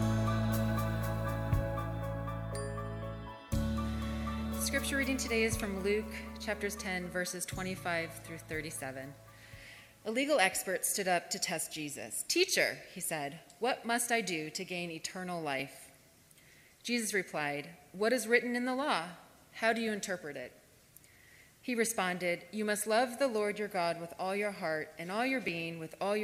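There are two tiny jumps in the audio, at 15.60 s and 25.48 s, each skipping forward by only a millisecond or two with no gap. That's most likely a dropped buffer (overrun), where the capture side missed a chunk and the two edges were butted together.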